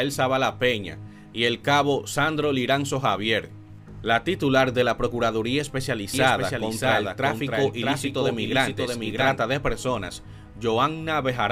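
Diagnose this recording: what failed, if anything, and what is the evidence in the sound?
A second capture path or an out-of-step edit likely mixed the audio in twice, producing a doubled audio track from 6.14 to 9.40 s. A dry, full-band copy trails by roughly 0.7 s, about 5 dB quieter, with no decay, and switches on and off abruptly.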